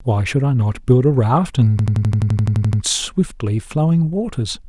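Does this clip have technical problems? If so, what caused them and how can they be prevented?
Yes. From 1.79 to 2.82 s the speech turns into a machine-gun stutter: one 85 ms fragment repeats twelve times at 11.7 Hz, replacing about a second of audio. This is a system hang loop. The computer or driver froze while the sound hardware kept replaying its ring buffer, whose length fits a 2048-sample buffer. To prevent it, run the audio thread at real-time priority and have the driver mute output when the buffer stops being refilled.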